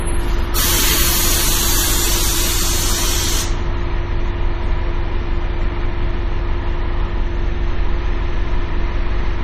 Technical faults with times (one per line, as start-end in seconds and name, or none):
0.00-9.43 MP3 compression